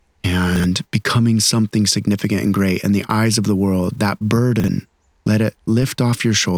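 A short speech recording with two kinds of fault. Chunks out of order occur at 0.56–0.64 s, just before "becoming something significant and", and at 4.6–4.68 s, just before "let it". In each, one 40 ms chunk plays a chunk late, giving a brief jumbled stutter. A DC step at 5.82 s, right after "let it", shifts the waveform's zero line and is heard as a low thump; a roughly 20 Hz high-pass then lets the offset decay.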